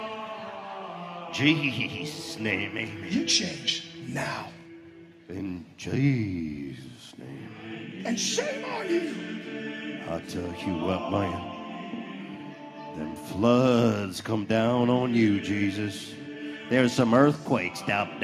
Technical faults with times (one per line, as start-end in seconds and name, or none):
none